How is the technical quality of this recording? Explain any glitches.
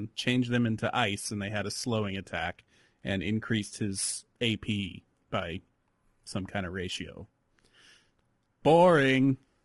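The speech is audibly degraded by codec damage throughout. Low-delay AAC compression runs across the whole recording. Short frames likely smear the pitch harmonics at a rate fitting about 32 kbps, leaving the voice rough and grainy with noise between harmonics.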